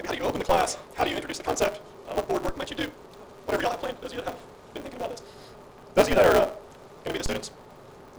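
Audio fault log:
Throughout: block size mismatch (truncated), each block's tail discarded, giving a 188 Hz buzz and 1.88 times speed at normal pitch, fitting 256-sample reads. The spectrogram shows harmonic lines at 188 Hz spacing.
0.49, 2.49, 6.13, 7.26 s: DC step, the waveform's baseline jumps abruptly, then drifts back as a 5 Hz high-pass bleeds it off, producing low thumps. The spectrogram shows brief low-frequency smudges.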